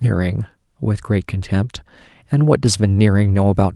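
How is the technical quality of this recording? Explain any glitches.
Technical quality takes a hit from timing trouble: the sender's and receiver's clocks don't agree, which causes small hiccups mid-clip. The audio came through an Opus call path, with a top end near 12 kHz that fits about 32 kbps.

Clock drift between sender and receiver runs through the whole clip. The sender's clock is about one percent slow, so the receiver's jitter buffer keeps draining and has to be topped up. You hear that as a faintly uneven pace rather than a clean break.

Repeated timing corrections show up from 0.94 to 2.6 s. The receiver stretches this stretch to 98% speed, padding in about 40 ms by repeating tiny pieces to stay in step with the slow sender. It comes across as slight stutters and a dragging, wobbly tempo.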